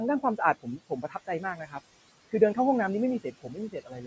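A noise suppressor runs throughout, cutting what it treats as steady background noise by about 20 dB frame by frame. The room noise, about 17 dB below the speech, drops away in the gaps and returns underneath the speech.

From 0.62 to 1.8 s, the suppressor mistakes parts of the speech for noise and turns them down by as much as about 18 dB. Scattered pieces totalling about half a second sound swallowed and faint. From 3.24 s to the end, the same speech cut by the noise suppressor recurs, with drops of up to about 20 dB across roughly 0.4 s.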